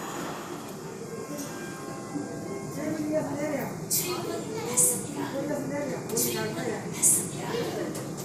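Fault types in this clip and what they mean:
MP2 compression: the whole clip sounds dull and gurgly, with a granular grit on what's left of the top end. That's likely from MPEG Layer II running short of bits, which fits something near 80 kbps, so upper sub-bands drop out and flicker back in.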